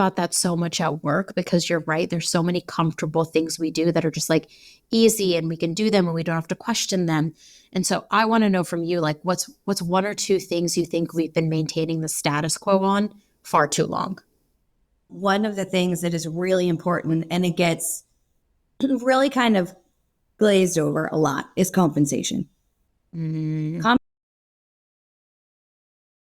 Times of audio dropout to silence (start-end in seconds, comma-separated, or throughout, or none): 23.97-26.33